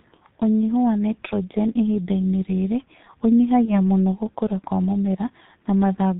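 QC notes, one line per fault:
Throughout: G.723.1 codec. The speech is confined below 4 kHz and carries the heavy damage of a coder running near 6.3 kbit/s, so it sounds muffled and hoarse with smeared consonants. The voice model is updated only once per 30 ms frame, which blurs fast transitions. Unlike a simple low-pass filter or narrowband line, the roughness and buzz sit inside the voiced sounds themselves rather than just missing treble.
3.65–3.81 s: VoIP packet loss concealed by the speech codec. A brief gap of about 30 ms, which fits a single lost frame, is filled by the decoder repeating its last pitch and filter at falling gain. That produces a short, fading stretch of extrapolated sound rather than silence or a click. Because each following frame builds on the patched one, the weak, distorted sound lingers until about 3.81 s, well past the gap, which distinguishes it from a plain dropout.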